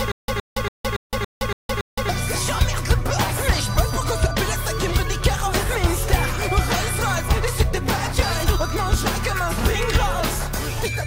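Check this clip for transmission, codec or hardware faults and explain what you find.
One fault is present: a stutter with silent gaps, already under way when the clip begins and lasting until 2.09 s. A 116 ms burst repeats seven times, each followed by 166 ms of digital silence, a 282 ms cycle. Likely cause: a stalled stream replaying its last fragment on each retry, losing the intervening audio.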